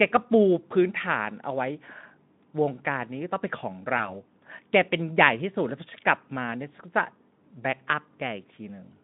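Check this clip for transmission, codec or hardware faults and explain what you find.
One transmission fault stands out, heard through Speex speech coding that keeps the audio lightly coloured and inside a narrow band of about 150 Hz to 3.6 kHz. From 3.97 to 4.20 s the speech is briefly stretched into a fading tone or noise, then comes back weak before recovering. This is VoIP packet loss concealed by the speech codec. The gap fits one lost 20 ms frame. The decoder filled it by extending its last pitch and filter at falling gain, and because each frame builds on the one before, the weakness lingers for about 200 ms.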